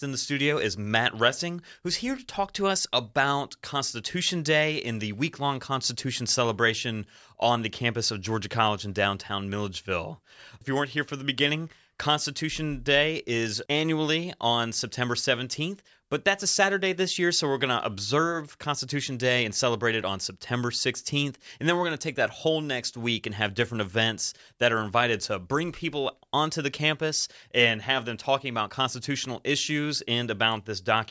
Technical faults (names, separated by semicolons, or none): none